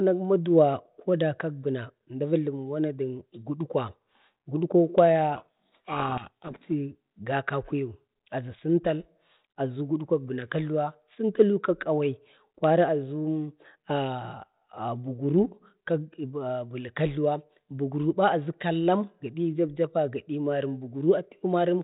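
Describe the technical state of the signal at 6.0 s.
A codec payload misread runs from 5.36 to 6.6 s: the decoder reads G.726 code words in the wrong bit order, burying the speech in harsh distortion.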